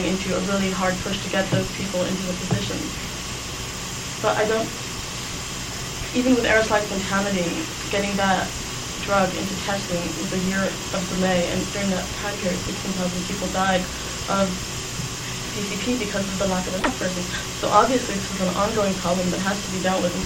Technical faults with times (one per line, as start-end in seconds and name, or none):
none